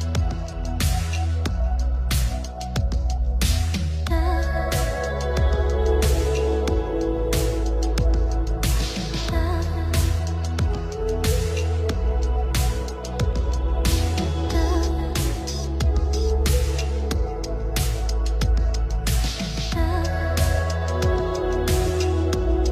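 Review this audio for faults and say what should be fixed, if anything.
Sample clock jitter runs through the whole clip. The converter's clock wobbles by around 2 microseconds, so each sample is taken at a slightly wrong moment. That timing error matters most where the waveform changes fastest, producing a hiss and roughness roughly 35 dB below the signal that swells on loud, bright passages and disappears in silence. On a spectrogram this shows as a broadband haze that brightens with high-frequency energy and clears in quiet gaps.

To prevent it, clock the converter from a stable, low-jitter source such as a good crystal oscillator or a clean PLL-recovered clock, rather than a noisy or poorly regenerated one.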